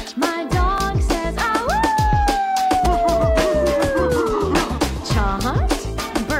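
A likely dropped buffer (overrun), where samples were overwritten before being read, jumps the sound forward at 0.78 s (a brief loss) and at 2.86 s (a longer one of about 70 ms).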